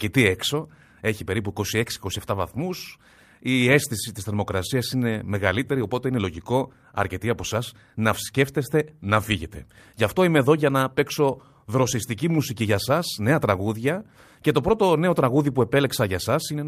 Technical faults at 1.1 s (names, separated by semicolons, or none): clock drift between sender and receiver; repeated timing corrections